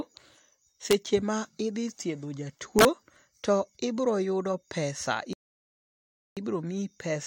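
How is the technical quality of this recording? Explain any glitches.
The recording is a speech clip marred by two kinds of glitch: two harsh cracks early on and one dead gap near the end.

Integer overflow, 0.91–0.93 s and 2.79–2.85 s: sudden violent cracks, far sharper than ordinary clipping distortion. Peaks pushed only about 1 dB and about 2 dB past the maximum integer value wrapped around to the opposite extreme instead of being clamped, so each one lurches across the full range.

Rebuffering stall, 5.33–6.37 s: the speech drops to silence for just over a second, then picks up exactly where it stopped, with nothing missing. The player had run short of downloaded audio and waited for more, adding about 1.04 s to the playback time.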